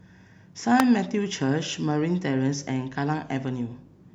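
A sharp snap cuts in at 0.80 s, sitting on top of the speech and peaking at about -5 dBFS. This is an electrical switching spike, likely from a nearby switch, motor or static discharge arcing briefly and coupling into the audio line.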